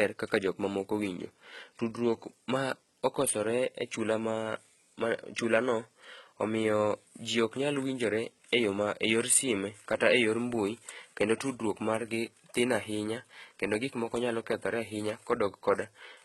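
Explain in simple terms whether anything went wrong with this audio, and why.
Yes, something went wrong: the speech was squeezed hard, likely by HE-AAC compression, which keeps only the lower pitches and fakes the treble by copying them upward. Throughout the clip, s sounds come out gritty and lispy, and nothing remains above about 11.8 kHz.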